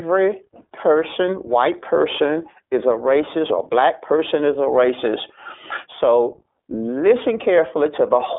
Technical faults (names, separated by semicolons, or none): iLBC codec